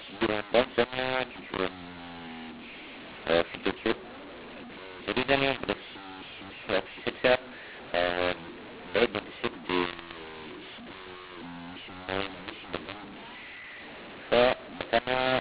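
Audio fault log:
Throughout, mu-law and A-law mixed up: the telephone audio was coded with A-law but decoded as mu-law, so sample levels are scrambled, some too loud and others too quiet. The speech turns harsh and distorted, and the quietest samples rise well above silence, filling pauses with noise.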